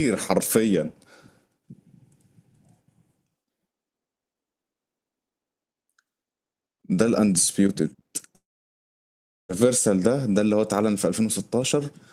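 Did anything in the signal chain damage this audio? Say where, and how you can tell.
Yes, most likely a long network dropout, 8.35 to 9.51 s. The speech stops and the last sound carries on briefly as a fading buzz before about 1.08 s of near-silence. The receiver concealed the gap, and speech resumes with roughly 1.1 s lost.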